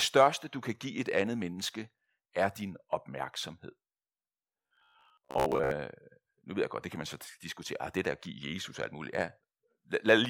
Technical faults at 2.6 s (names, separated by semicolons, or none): none